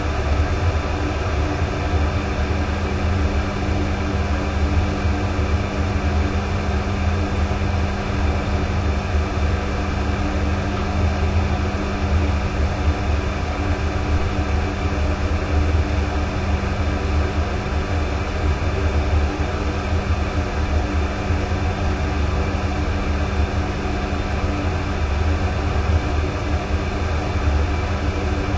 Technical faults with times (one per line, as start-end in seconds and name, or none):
0.00-28.57 wrong sample rate